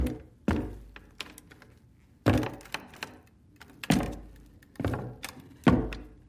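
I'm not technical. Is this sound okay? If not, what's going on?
No, the whole clip has a wrong sample rate problem: it plays about 1.45 times too fast and roughly 6.45 semitones too high, which fits 22 kHz audio played at 32 kHz.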